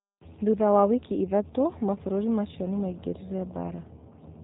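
From start to finish, the speech carries the signature of the G.729 codec, specifically the G.729A variant, with plainly audible coding damage consistent with an 8 kbit/s VoIP stream. Nothing reaches above about 3.8 kHz, so sibilants and breath lose their crispness. The codec rebuilds each 10 ms frame from a vocal tract filter, a pitch predictor and a handful of pulses rather than the actual waveform. That leaves the voice intelligible but rough, buzzy and faintly synthetic.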